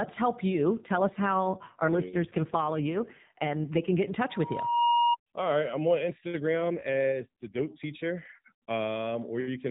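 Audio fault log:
0.50 to 4.18 s and 6.40 to 7.65 s (the second just after "I'm on"), AMR rate drop: the speech turns buzzier and more synthetic, consistent with a fall from 12.2 to about 5.9 kbps. The band stays below 4 kHz with no gap, unlike a dropout.
4.29 to 5.17 s, loudspeaker feedback squeal: a single 949 Hz tone swells over about half a second to roughly 5 dB above the speech as the mic-speaker loop self-oscillates. This is a steady pitch, unlike broadband noise.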